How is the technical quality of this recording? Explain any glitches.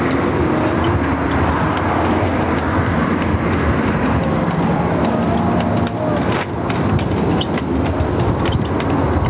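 The recording is held back by one fault that runs the whole way through: gain pumping. The level keeps surging and ducking, with roughly a 10 dB swing. The likely cause is input gain set far too hot, so a fast limiter clamps down on every loud sound. Everything ends up squashed, with loud and soft parts closer in level. Separately, nothing reaches above 4 kHz, which is just the telephone-band G.711 A-law call codec and fits a 64 kbps stream.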